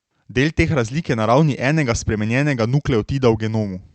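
No technical faults can be heard in this recording.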